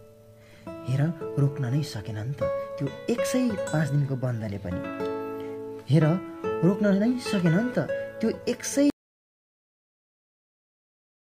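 At 8.9 s the sound cuts out abruptly. What follows is an audio dropout to silence. It lasts about 2.3 s, through to the end. No room tone remains, only silence. The input was likely lost while recording carried on.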